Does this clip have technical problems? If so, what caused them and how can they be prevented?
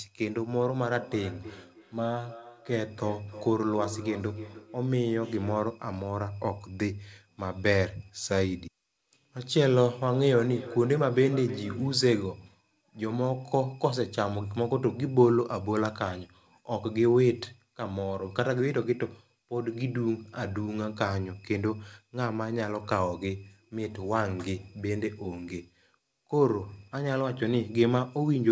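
Yes. Feedback echo between two devices occurs from 0.75 to 5.77 s and from 10.12 to 12.02 s. A nearby device replays the call into this microphone, so the speech returns roughly every third of a second, at most about 14 dB down. Each pass gets thinner, and the repeats are discrete, unlike smeared reverberation. Muting the second device or using headphones prevents it.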